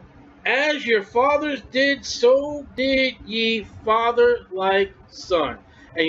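No technical faults are audible.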